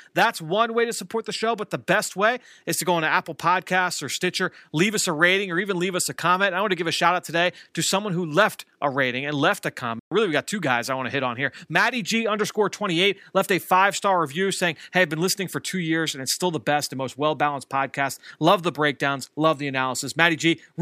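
Speech with a playback stall from 9.99 to 10.12 s, right after "rating and left a": the audio drops to silence for about 120 ms mid-flow, then resumes. The likely cause is the player running short of data or its thread being blocked briefly.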